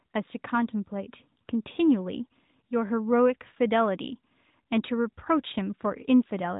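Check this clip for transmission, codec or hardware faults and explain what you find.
No transmission, codec or hardware faults found; the speech comes through an AMR narrowband mobile codec path at what sounds like its 12.2 kbps mode, with nothing above 3.8 kHz, as that path imposes.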